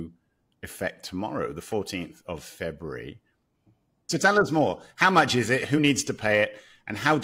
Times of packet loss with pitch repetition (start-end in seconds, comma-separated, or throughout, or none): none